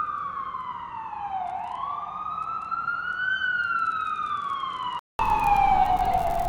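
From the start to 5.19 s, the audio comes through a narrower, duller channel, with nothing above 10.5 kHz, a level roughly 10 dB lower, and a different background noise sitting around 50 dB below the signal. At 5.19 s a gap of about 200 ms is followed by fuller, brighter sound. This is likely the input switched to a poorer device for the opening section, with the original input restored at the switch.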